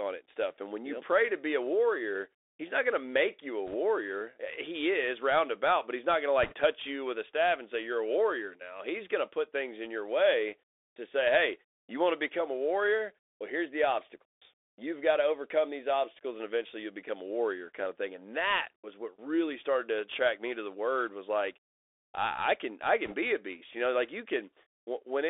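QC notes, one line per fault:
Throughout: Bluetooth CVSD headset codec. The one-bit delta coder, which fits a 64 kbps CVSD link, passes only about 300 Hz to 3.6 kHz, so the sound is thin and muffled. Sibilants turn scratchy and a granular hiss sits underneath. A spectrogram shows a hard ceiling near 3.6 kHz and speckled low-level noise.
3.67–3.75 s, 6.43–6.54 s, 23.05–23.15 s: bit errors on a Bluetooth voice link. They fall after "to make you a", before "touch you with a", and between "I I can I" and "be a beast". Flipped bits at a rate of a percent or two each nudge the slope only slightly, so there is brief crackly rushing rather than clicks. On a spectrogram this appears as short broadband smears, with no spikes in the waveform.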